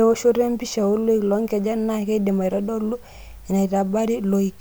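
Nothing in this recording stands out as a technical fault; the speech comes across without any dropouts, glitches or other problems to point to.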